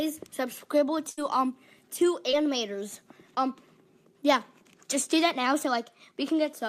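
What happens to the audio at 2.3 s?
Short concealed packet loss hits from 2.31 to 2.35 s. About 20 ms of audio failed to reach the decoder in time, so the receiver extended the preceding sound for roughly 14 ms and blended back into the real signal, leaving a brief smear or wobble.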